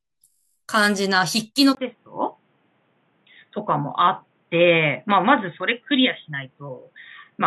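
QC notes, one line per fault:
0.30–0.56 s, system hang loop. A 21.33 ms slice of speech repeats 12 times, which fits a 1024-sample ring buffer replayed while the system froze. At 46.9 Hz the repeats fuse into a steady buzz rather than a stutter.
1.75 s to end, input switched to a poorer device. After a 20 ms gap the speech turns dull and narrow, with nothing above 3.8 kHz. Loudness stays about the same, and a faint new noise floor appears far beneath the speech. A likely headset or lower-grade microphone takeover.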